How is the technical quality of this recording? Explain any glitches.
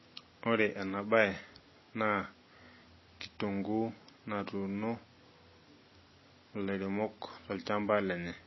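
The technical quality is poor. The speech carries plainly audible codec damage from start to finish. The likely cause is MP3 compression at a very low bitrate, which fits about 24 kbps. Short of bits, the encoder cuts all treble at a fixed point. Nothing is heard above 5.8 kHz, so s sounds lose their edge. Weak frequency lines drop in and out between frames. That gives the speech a watery, swirling texture. Attacks sound smeared.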